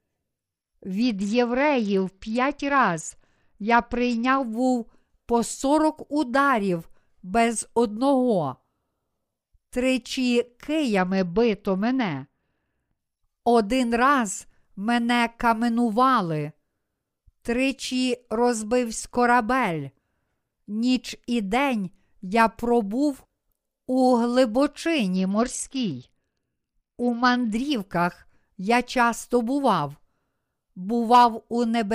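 Bluetooth SBC bit pool drops hit this speech at 1.02–4.42 s (ending just before "був по сорок ударів"), 10.98–12.99 s and 25.16–27.56 s. Treble dulls and gritty noise rises, which fits the bit pool falling from 31 to 9, about 72 kbps, so the upper sub-bands starve.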